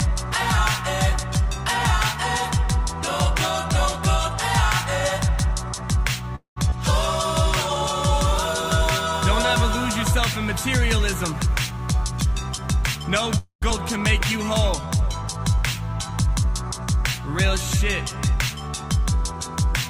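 The audio has two call audio freezes, two skip aheads, and one stretch each of jitter buffer speed-up and slow-down. At 6.35 to 6.58 s the sound stalls: the last bit gets stretched into a fading buzz and then about 120 ms of silence, roughly 0.21 s in all. That's most likely packets held up in transit until the jitter buffer ran dry. The same thing happens at 13.38 to 13.64 s, this time about 0.24 s with roughly 110 ms of silence. Each freeze is followed right after by a skip ahead, at 6.70 s and 13.70 s. Playback jumps forward almost seamlessly, losing about a tenth of a second the first time and about a fifth the second. That's a stretch of audio dropped in transit or by an overflowing jitter buffer while later audio was already waiting. Just before the second freeze, from 11.45 to 13.38 s, you get jitter buffer speed-up. Tiny pitch-period slices get cut out again and again, so the sound runs about 6% fast at unchanged pitch, shaving roughly 100 ms of delay and feeling a little rushed. 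Then from 14.81 to 16.42 s it swings the other way into jitter buffer slow-down. Repeated pitch periods pad in 132 ms, dropping the pace to about 92%, so things drag and stretch a bit while the buffer rebuilds its cushion.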